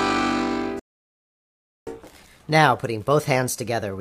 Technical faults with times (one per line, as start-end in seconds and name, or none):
0.79-1.87 playback stall
1.87-4.01 catch-up at higher speed